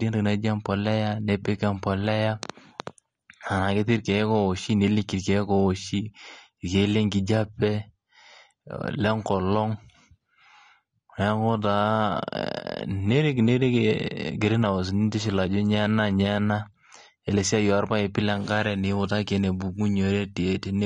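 From start to finish the speech has nothing above 9.6 kHz and a dull, smeared quality, most likely from AAC compression at a low bitrate around 32 kbps. Unlike a plain low-pass filter, the damage sounds like coded artefacts, with smeared, fizzy sibilants.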